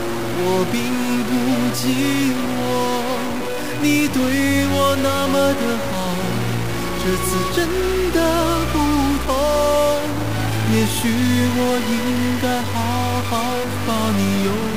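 All the way through, the audio has a harsh, buzzy edge that never lets up, and the quiet stretches don't go silent but sit on a steady bed of grainy noise. That combination points to a likely stuck bit somewhere in the converter or data path. A single bit pinned high or low knocks roughly half the samples off by a fixed step, here somewhere around -25 dBFS, so the distortion follows the waveform and the pauses fill with noise.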